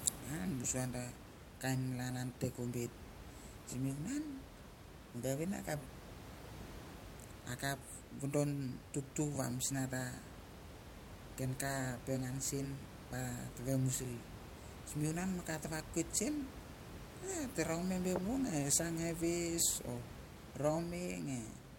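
Nothing technically wrong turns up in this speech recording; the only thing beyond the talking is some ordinary room noise sitting about 13 dB below the speech, which is simply part of the space it was recorded in.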